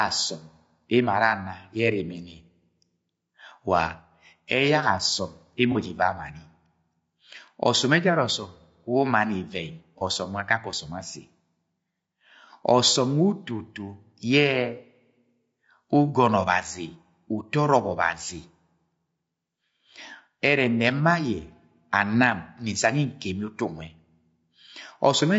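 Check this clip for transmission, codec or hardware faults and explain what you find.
Two faults are present: codec degradation across the whole clip and two brief dropouts patched by concealment.

The speech sounds rough and grainy from start to finish, with noise between the harmonics and a thin, synthetic-sounding top band. The likely cause is low-delay AAC compression (AAC-ELD) at a low rate, consistent with about 32 kbps. Its short frames resolve pitch harmonics poorly and leave too few bits for fine detail.

AAC frame loss with concealment occurs at 5.72 to 5.77 s and again at 9.98 to 10.03 s. Each sounds like a brief smeared, noisy patch, consistent with one lost frame of about 30 ms. The decoder fills the gap by reusing and perturbing the last good spectrum rather than falling silent.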